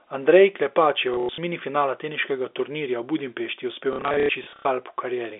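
Speech heard through a telephone-band channel, limited to about 300 Hz to 3.6 kHz, with G.711 coding, breaks into short robotic stutters from 1.14 to 1.38 s and again, for longer, from 3.93 to 4.65 s. This is packet loss with the last packet repeated. Missing stretches are filled by replaying the previous chunk. Repeated runs of up to 90 ms give a brief buzz, and the pattern fits 30 ms packets.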